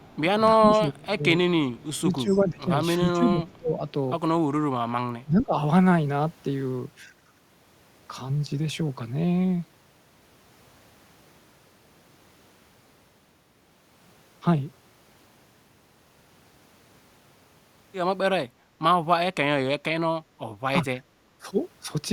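At 0.00 to 0.19 s a faint delayed copy of the speech sits under the start, well below the main level. It returns at 2.28 to 2.41 s, slightly louder, and as a short scrap at 3.53 s. This is an echo leak. Each copy trails by 336 ms. A loudspeaker on the far end likely fed the microphone, and its echo canceller let part of that sound back through.

From 0.55 to 1.26 s the speech sinks, losing roughly 25 dB at its deepest. It dips again across 1.69 to 3.84 s, by roughly 20 dB, in patches over about a second and a half. At 4.60 to 5.54 s it falls hardest, roughly 30 dB. A last brief dip comes at 21.38 to 21.47 s. This is speech suppressed in double talk. Both sides were likely talking at once. The canceller could not tell its own talker from the echo, so it turned everything down.

At 21.01 to 21.10 s the room sound drops for about a tenth of a second, by about 11 dB, then comes back. This is background gated by the echo canceller. 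While the loudspeaker played, the canceller clamped the microphone hard and then released it.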